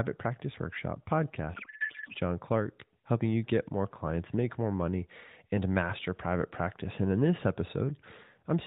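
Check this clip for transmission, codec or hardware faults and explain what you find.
One fault: a codec payload misread from 1.54 to 2.14 s. The receiver unpacked octet-aligned AMR frames as bandwidth-efficient ones, shifting every field. For that stretch the speech gives way to garbled noise and warble that barely tracks it, before the narrowband AMR sound returns.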